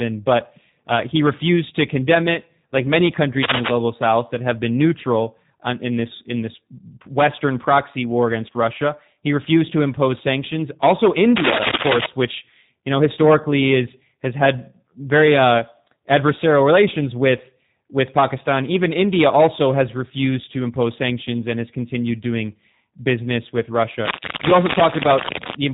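Throughout the speech, G.729 codec damage is plainly audible. Nothing passes above 3.8 kHz, and each frame is resynthesised from a vocal-tract filter, pitch predictor and sparse pulses, fitting an 8 kbit/s stream. Unlike simple band-limiting, this adds a rough, buzzy, synthetic texture.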